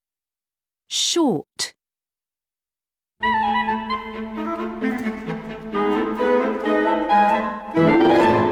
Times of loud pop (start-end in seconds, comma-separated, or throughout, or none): none